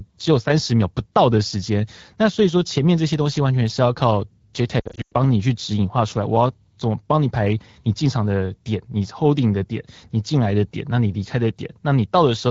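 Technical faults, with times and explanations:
4.79–5.13 s, lost AMR speech frames: the speech stumbles through about a third of a second of dropouts and warbles, with one stretch thinning almost to silence before the voice returns briefly rough. Radio errors corrupted frames scattered across this stretch, about 220 ms of them in all, the longest unbroken run about 100 ms. The AMR-WB decoder filled each gap by repeating its last good pitch and vocal tract settings at falling gain.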